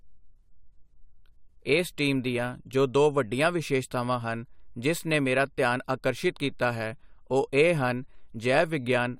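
A speech clip with no technical faults to report.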